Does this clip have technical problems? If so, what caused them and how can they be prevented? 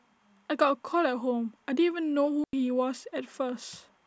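Yes. A digital wireless dropout occurs from 2.44 to 2.53 s: the receiver lost too much data from the transmitter and muted for about 93 ms, leaving a clean hole of near silence in the speech with no noise burst either side. Keep clear line of sight, shorten the transmitter-receiver distance and avoid congested frequencies.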